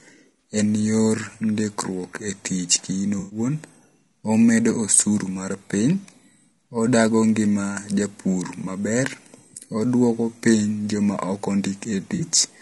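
The speech was likely carried through low-delay AAC compression at around 32 kbps, whose short frames resolve pitch harmonics poorly, leaving the voice rough and grainy throughout. Lost AAC frames were patched by concealment from the last good spectrum, giving a brief smeared, noisy blip at 0.40 s, a longer phasey 120 ms patch from 3.19 to 3.39 s just after "ndikruok e tich kiin", and another 40 ms smear at 12.15 s.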